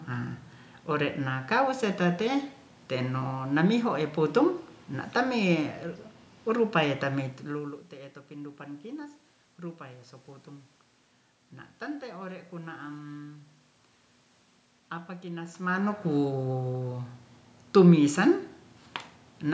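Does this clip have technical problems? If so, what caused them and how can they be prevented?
No, nothing stood out as a technical problem on listening to this speech clip, so there is nothing here that needs preventing.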